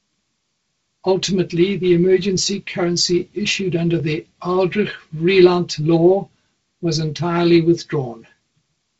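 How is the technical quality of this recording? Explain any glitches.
One glitch stands out in this speech clip, heard through G.722 wideband telephone coding, which leaves nothing above 7.7 kHz and, at 48 kbit/s, a slightly noisier lower band.

A repeated buffer occurs at 4.00 s, right after "emergency currency issued under". New audio failed to reach the playback device in time, so it played its last block again, once more. The repeated piece is only about 1.33 ms long, which fits a 64-sample buffer. At that size the doubling isn't heard as a stutter but as a click or brief buzz at the hard join.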